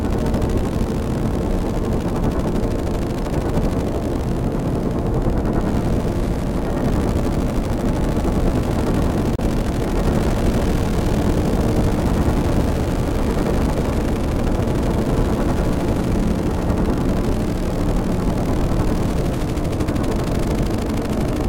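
An everyday sound recording with a brief gap from 9.35 to 9.39 s, where about 27 ms of audio vanishes into silence, most likely a Bluetooth dropout from a couple of lost packets. Unlike a stutter or repeat, the sound resumes further on, as if it had kept playing.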